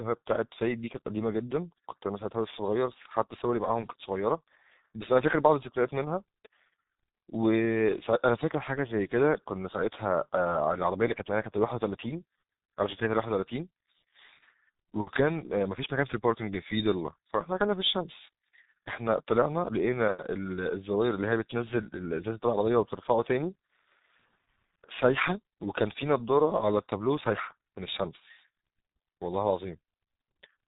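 G.723.1 codec damage runs throughout the speech. The codec models the voice in 30 ms frames at a very low rate, consistent with about 6 kbit/s, and passes nothing above 4 kHz, so the speech sounds heavily muffled and hoarse, with blurred consonants.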